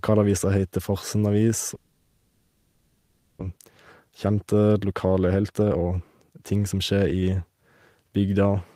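From 1.75 s to 3.43 s the speech gives way to a filled-in stretch: the last sound is carried on as a buzzy, hissing continuation that fades, with no true silence. This is most likely a long network dropout. The receiver concealed the whole gap of about 1.7 s, and when the audio resumes about a second of speech is gone and never played. The later arrival leaves the buffer holding roughly 0.7 s more than it needs.

From 3.51 s to 7.23 s the jitter buffer speed-up works off that excess. The receiver repeatedly cuts out short segments of one or a few pitch periods, so the speech plays at about 117% of normal rate while its pitch stays unchanged. Across this span roughly 0.7 s is removed, and the delivery sounds noticeably hurried until normal pacing returns.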